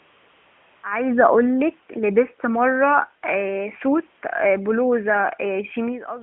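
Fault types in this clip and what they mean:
AMR comfort noise: The clip opens with about 0.82 seconds of steady, smooth hiss instead of the real room background. During that stretch the phone treated the input as silence and sent no speech frames. The receiving end then invented noise from a rough outline of the background's level and spectral shape. At about 0.82 s, real frames resume and the synthetic fill gives way to the genuine narrowband AMR signal.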